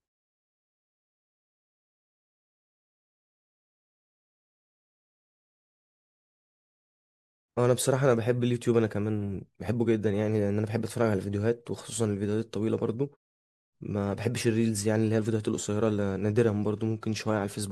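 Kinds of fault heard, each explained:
No faults detected in the speech; nothing to report.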